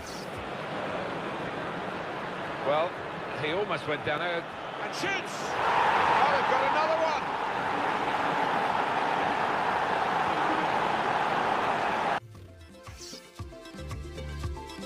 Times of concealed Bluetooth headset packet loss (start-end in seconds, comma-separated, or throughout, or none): none